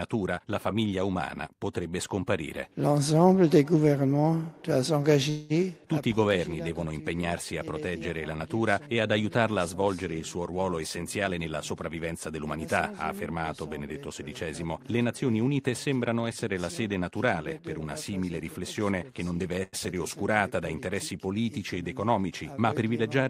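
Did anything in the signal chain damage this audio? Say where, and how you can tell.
Yes. At the network and jitter-buffer stage there is a call audio freeze from 5.29 to 5.52 s: the last sound is carried on as a fading buzz or hiss for about 205 ms, then resumes where it stopped. It likely comes from delayed packets draining the buffer. Unlike dropout, nothing is skipped; the audio simply arrives 205 ms later.

Jitter buffer speed-up follows, from 11.24 to 13.14 s at 110% speed, trimming about a fifth of a second, and from 22.74 to 23.20 s at 106%, trimming a few tens of milliseconds. Pitch holds steady while the timing hurries, which separates it from a resampling or clock error.

A short stall from a late packet sits at 19.63 to 19.75 s. The sound is held for 95 ms with a slight buzz or dip, then continues with nothing lost. It is the same mechanism as the freeze, but far shorter.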